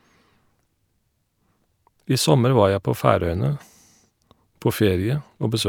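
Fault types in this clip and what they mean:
No fault types are present in this clip.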